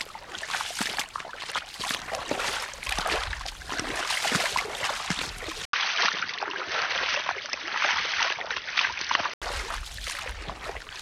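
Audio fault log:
5.65 to 9.42 s, input switched to a poorer device: after a short gap of 80 ms, everything above 6.2 kHz vanishes, the level shifts a little and faint new background noise sits well under the sound. It's most likely a swap to a narrower-band microphone, and it clears at 9.42 s.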